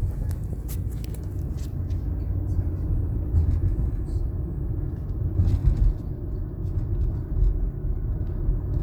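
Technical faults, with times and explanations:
No technical faults, so there are no times or explanations to give.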